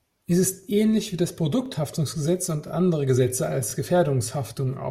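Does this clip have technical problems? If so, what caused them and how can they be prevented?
Yes. Overlapping chunks: the speech was processed in 1.0-second chunks, each starting 23 ms before the previous one ended. That slice plays twice at every join, so stutters occur at 0.63 s (before "ähnlich wie das"), 1.66 s (after it), 2.68 s and 3.70 s. Starting each chunk exactly where the last ended prevents it.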